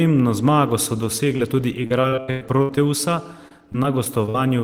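Short concealed packet loss at 1.36 to 1.40 s leaves a brief smear in this speech clip. About 20 ms of audio arrived too late or not at all, and the receiver bridged the hole by extending the preceding sound for roughly 22 ms before blending back into the real signal. Repeated packet loss (robotic sound) follows from 1.83 to 2.78 s. About ten separate holes, the longest near 102 ms, are each patched by continuing the last sound, so about 38% of that stretch is synthetic fill and the result is choppy, with pieces of the speech missing. A second, milder run of the same fault spans 3.48 to 4.35 s, with about six gaps of up to 47 ms that conceal roughly 13% of the span and give a lighter roughness.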